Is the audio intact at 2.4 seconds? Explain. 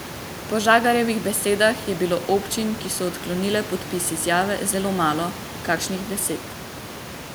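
Yes, the audio is intact at 2.4 seconds, with only the room's background noise, about 15 dB below the speech, audible beneath it.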